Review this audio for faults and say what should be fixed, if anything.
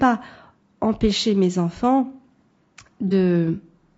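The speech carries plainly audible low-delay AAC compression throughout, likely AAC-ELD at a rate that fits around 32 kbps. Short frames blur pitch harmonics, leaving grainy noise between them, visible on a spectrogram as smeared harmonic lines and a patchy top band. Encoding at a higher bitrate would prevent it.

AAC frame loss with concealment occurs from 3.08 to 3.13 s, where about 30 ms of audio was lost and rebuilt from the preceding spectrum, giving a brief smeared, noisy patch. A spectrogram shows a short vertical smudge without clear harmonics, and the waveform a slightly irregular envelope. Better network protection or retransmission would prevent it.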